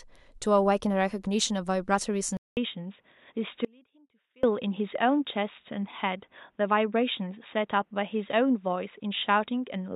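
At 2.37 s the speech goes quiet for about 200 ms and then returns dull and boxy, with nothing above 3.8 kHz from there to the end. This is an input switched to a poorer device, most likely a change to another microphone or a headset's call profile. Loudness stays about the same, and a new noise floor sits roughly 50 dB below the signal. A spectrogram shows the upper band ending abruptly along a flat ceiling, just after a short blank column.

From 3.65 s to 4.43 s the wanted signal vanishes for 785 ms, leaving only a faint trace about 30 dB down. This is an audio dropout to a faint residue. The path likely stayed live after the break, so the gap is not true silence. Both edges are abrupt rather than faded. The waveform collapses to a thin band and then jumps back to its normal amplitude, and the spectrogram shows a pale, nearly empty block with sharp vertical edges.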